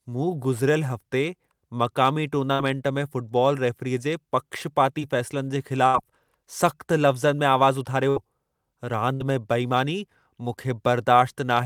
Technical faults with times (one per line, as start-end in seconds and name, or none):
5.87-5.95 burst of packet loss
8.10-8.17 burst of packet loss
9.14-9.21 burst of packet loss